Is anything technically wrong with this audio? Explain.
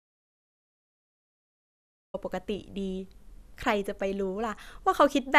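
Yes. From the very start until 2.14 s there is total silence with no room tone: an audio dropout to silence, likely from lost input while recording continued writing silence.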